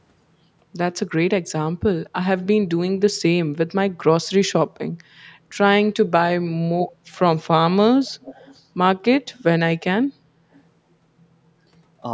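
From 8.06 to 8.63 s, and again at 9.33 to 9.43 s and 10.53 to 10.59 s, a faint copy of the speech trails about 267 ms behind, fading from quiet to barely audible. This echo leak is likely a loudspeaker echo canceller letting residue through.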